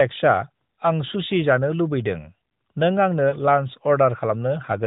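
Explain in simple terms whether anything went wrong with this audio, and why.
At about 3.30 to 3.34 s there is a brief dip or warble: one lost AMR speech frame. A single 20 ms chunk of the phone signal arrived damaged, so the decoder filled the gap by repeating the previous sound more quietly, through the narrowband mobile codec.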